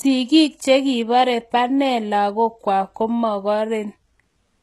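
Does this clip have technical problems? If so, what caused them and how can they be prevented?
Yes. Throughout the speech, s sounds are gritty and lispy, and nothing is heard above 12.3 kHz. The likely cause is HE-AAC compression, at a rate fitting about 16 kbps. Its treble is rebuilt from copied lower bands, so harmonics misalign. Encode at a higher bitrate.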